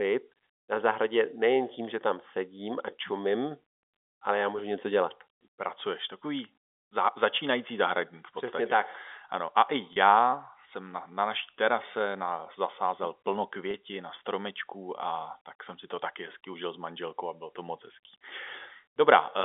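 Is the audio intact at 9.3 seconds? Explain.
Yes, the audio is intact at 9.3 seconds, with the speech carried cleanly through G.711 telephone coding and no fault at that moment.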